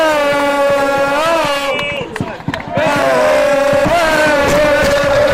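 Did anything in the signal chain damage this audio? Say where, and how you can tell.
Yes. At the driver or buffer stage, one output buffer wasn't filled in time, leaving a block of digital silence at 1.97 s. It lasts about 5.3 ms, which fits a 256-sample buffer. The sound drops abruptly to silence and returns unfaded, so it's heard as a tick or dip.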